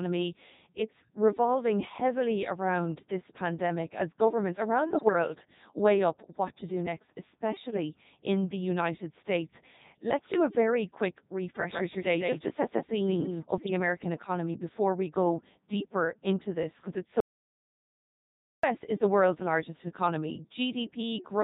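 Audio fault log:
throughout: Codec 2 vocoder. The speech is rebuilt from sine waves driven by pitch, voicing, level and a spectral envelope, so it sounds heavily robotic and buzzy. This fits Codec 2's 3.2 kbit/s mode. Unlike ordinary low-bitrate codec smearing, the original waveform is gone entirely.
4.98–5.13, 7.66–7.77 and 13.58–13.70 s: bit errors on digital voice radio. Brief bursts, each about 0.1 to 0.15 s, where the synthetic speech suddenly lurches in pitch, loudness and tone colour into warbles and bleeps. This points to an error rate of a few percent corrupting a handful of vocoder frames. Unlike the steady vocoder buzz, these are sudden, jumbled glitches that pass quickly.
17.20–18.63 s: audio dropout to silence. The sound cuts off for about 1.43 s and resumes mid-flow, and the gap is dead digital silence with no background tone at all. Whatever was spoken there is lost. The likely cause is an input that dropped out while silence kept being written. 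This differs from a bit-error burst, which garbles the sound rather than removing it.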